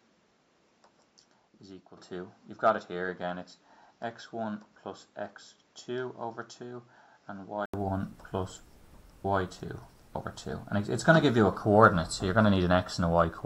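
From the start until 7.74 s, the recording most likely comes from a poorer input device, and the system then switches back to a better one. During that stretch nothing reaches above 7.6 kHz, so the sound is dull and boxy, a few decibels quieter, and carries its own faint background noise. At 7.74 s a silence of about 80 ms marks the switch, after which the sound opens up and brightens.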